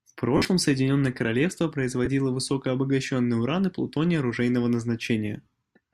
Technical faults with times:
0.37-0.45 lost LE Audio frames
2.05-2.07 lost LE Audio frames

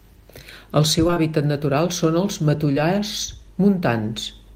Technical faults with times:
1.07-1.18 short concealed packet loss
2.72-2.78 short concealed packet loss

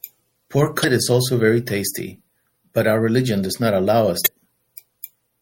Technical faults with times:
0.00-5.42 MP3 compression
0.81-0.85 damaged data in a compressed stream
4.24-4.28 damaged data in a compressed stream

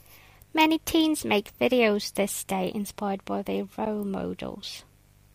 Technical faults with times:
0.00-5.35 mains buzz
3.85 gap between stream segments

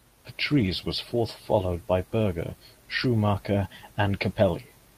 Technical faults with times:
0.53-0.71 lost packet rebuilt from error correction
3.03-3.05 lost packet rebuilt from error correction

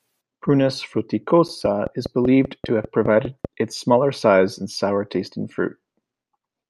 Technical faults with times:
1.65-3.46 train of clicks

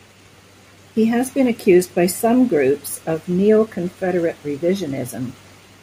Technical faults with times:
none

